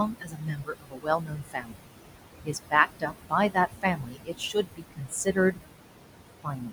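Across the whole clip the background sinks and swells between and under the speech. These are noise suppressor artifacts: the suppressor pulls down bands it judges to be steady noise by about 21 dB, frame by frame, while room noise sits only about 9 dB below the speech.

From 0.08 to 1.92 s, 2.45 to 3.33 s, 3.54 to 5.59 s and 6.43 s to the end, parts of the speech sound swallowed and faint. This is speech cut by the noise suppressor, which mistakes softer speech for noise and drops it by about 20 to 22 dB. Roughly one and a half seconds are lost in the first stretch, about a second in the third, and a few hundred milliseconds in each of the others.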